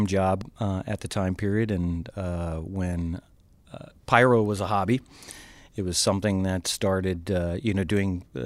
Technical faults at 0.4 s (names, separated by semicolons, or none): loud pop